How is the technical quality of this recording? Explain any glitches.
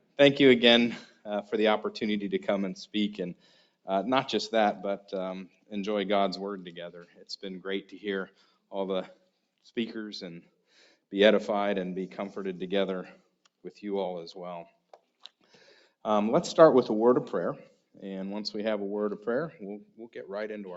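The recording has audible processing faults: a speech noise suppressor was active on non-speech audio for the full clip. The call's microphone chain band-limits everything to nothing above 8 kHz.

Noise suppressor applied to music or sounds: Throughout the clip, the suppressor treats sustained, steady material as background noise and keeps adjusting its gain, with level losses swinging by around 5 dB. Transients pass largely intact, but held sounds and decays are pulled down unevenly. The result is a constant pumping and flutter, with tails that thin out instead of ringing naturally.

Sound cut by the noise suppressor: Sharper dips occur at 1.07–1.26 s, 3.34–3.69 s, 5.48–5.71 s, 7.04–7.28 s and 8.28–8.53 s. In each, the suppressor judged the ongoing sound to be noise and attenuated it by about 12 dB, or about 11 dB at 8.28 s. Most dips last around a fifth of a second, and the one at 3.34 s lasts closer to half a second. 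They are heard as brief holes where sustained content sinks abruptly and then recovers.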